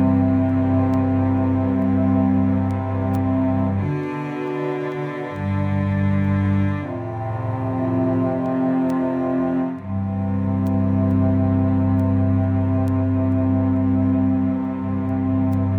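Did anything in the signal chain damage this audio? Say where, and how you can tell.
Yes, word clock ticks at the digital link: uneven ticks about every 0.4 s from 0.50 to 15.53 s, as an unlocked receiver clock, roughly 50 ppm off, slips one sample each time.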